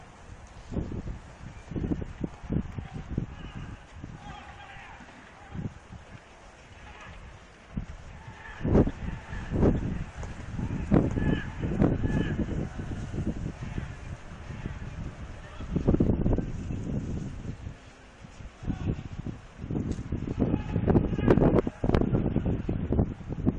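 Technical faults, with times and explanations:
8.56 to 16.08 s: doubled audio track. A second full-band copy of the sound trails the original by about one second at roughly equal level, with no decay or room colour, and starts and stops abruptly. This is likely a slower second capture path or an out-of-step edit.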